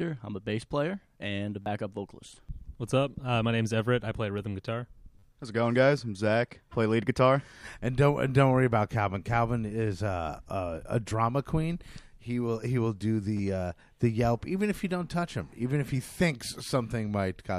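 Audio failed to arrive in time, so a repeated buffer was played at 1.62–1.66 s, 5.19–5.23 s, 7.66 s, 11.1 s and 13.37–13.39 s. Each is a click or brief buzz, consistent with a 10 ms buffer.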